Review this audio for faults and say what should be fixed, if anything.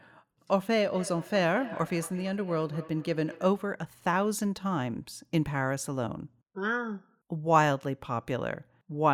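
Feedback echo between two devices, from 0.93 to 3.59 s: the speech comes back as a delayed copy roughly a fifth of a second behind, peaking about 16 dB below the direct sound. A second device in the room is playing this call aloud, and the microphone picks that playback up again, which its echo canceller cannot remove because the sound is not its own output. To prevent it, mute or disconnect the second device's speaker, or use headphones.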